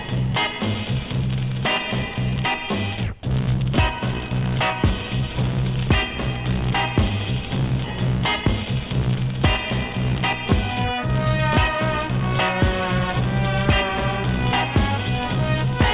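At 7.84 s the audio shows a skip ahead: it jumps forward with no silence or filler, and roughly 0.7 s of material is simply gone, the two sides butted together. Unlike a dropout, there is no gap or concealment noise, just a discontinuity where the jitter buffer discarded queued audio to cut its delay by that same amount. Straight after, from 8.06 to 8.64 s, a jitter buffer speed-up plays the sound at 115% speed by trimming short pitch-period slices, removing about a tenth of a second in total. It sounds hurried, but the pitch stays put, which separates it from a resampling or pitch-shift error. The band-limited call path, with nothing above 4 kHz, points to G.711 A-law at 64 kbps.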